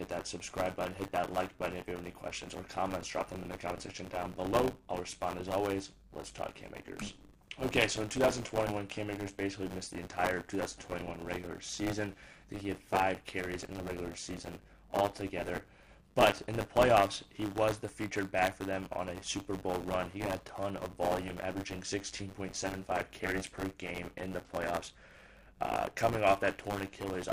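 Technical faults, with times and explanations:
Throughout, buffer tearing: a steady robotic buzz at 100 Hz rides on the sound, which points to a buffer period of about 10 ms. The writing program and the playback hardware have drifted so they cross inside every period. About a tenth of each buffer repeats audio from roughly 20 ms earlier, with hard joins at both ends. Unlike an underrun, nothing drops to silence; the rattle is regular, unbroken, and vanishes whenever the signal does.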